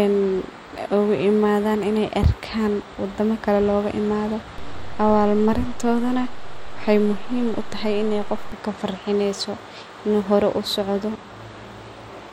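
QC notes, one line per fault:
4.58–8.52 s, DC step: a low thump at 4.58 s and another at 8.52 s while the speech carries on unchanged, as the zero line jumps by about -25 dBFS, then steps back.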